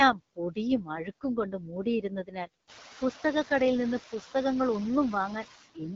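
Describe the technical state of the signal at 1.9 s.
At 1.9 s the speech has just come out of a short stretch turned down by the noise suppressor. Speech cut by the noise suppressor runs from 1.5 to 1.86 s. The suppressor mistook part of the speech for background noise and turned it down with the noise, by about 6 dB at the deepest point. About a fifth of a second of speech is affected in total. Those sounds come across swallowed and faint, and the level recovers right around 1.9 s.

Noise suppressor artifacts are present here as well, since they run through the whole clip. The suppressor pulls down the bands it judges to be steady noise, frame by frame, by about 10 dB. As a result the background dips between phrases and comes back up under the speech.

The AMR wideband (HD Voice) codec also colours this moment. There is nothing above 7.4 kHz. The rough, raspy grain points to AMR-WB at one of its lowest rates, which fits about 8.85 kbit/s. 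At that rate the codec's vocal tract model can't track the speech closely, so the damage is plainly audible. The top band is filled with shaped noise rather than real detail.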